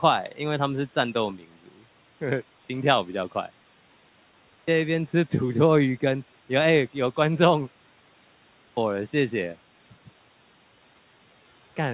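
From 1.37 to 1.82 s, the noise suppressor cuts speech. It mistakes parts of the speech for background noise and turns them down by up to about 12 dB. Roughly 150 ms of sound is affected. Those parts sound faint and swallowed.

Next come three clipped starts after a pause, at 4.2 s, 8.28 s and 11.09 s. Each follows a pause of 0.7 s, 0.61 s and 1.0 s. The output device sleeps in the silence and wakes too slowly. About 0.48 s, 0.49 s and 0.53 s are lost. The speech bursts in abruptly, missing its first sounds.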